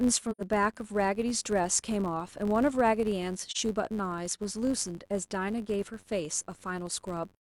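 Filter restarted on every block, throughout the speech: a filter in the chain loses its stored state at each block boundary and begins the next block as if from silence, so every block opens with a small transient. The ticks repeat at about 93.8 Hz, which fits a 512-sample buffer, and merge into a steady buzz riding under the speech that grows louder with the voice and falls away in quiet passages.

AAC frame loss with muting, from 0.31 to 0.41 s: the decoder had nothing for this stretch and set its spectrum to zero, so the sound drops out for about 85 ms, a length that fits two lost frames. The overlapping windows fade the audio down and back up rather than cutting it, so the gap has soft edges.

AAC frame loss with muting again, from 3.51 to 3.57 s: a shorter hole of about 43 ms, matching a single lost frame. It has the same gentle fade out and in, and is heard as a brief dip in the speech.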